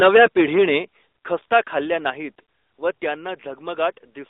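Speech heard through an AMR narrowband mobile codec throughout, with microphone overload and two microphone volume step-downs early on. The line spans only about 300 Hz to 3.7 kHz, and the voice has the buzzy, synthetic edge of a vocal-tract model at a middling rate, consistent with roughly 10.2 kbps AMR-NB. That rasp is present at every moment, which separates it from simple band-limiting that only dulls the sound. From 0.0 to 0.78 s the loudest syllables carry a harsh crackle, with peaks about 8 dB over the converter's limit and roughly a tenth of samples flattened. This is likely microphone overload, and it is tied to peaks rather than spread evenly like the codec buzz. At 0.07 s the level drops by about 2 dB and at 1.08 s by about 7 dB, likely the call software stepping the microphone volume down. Voice and background fall together instantly, not as a gradual fade or per-syllable limiting.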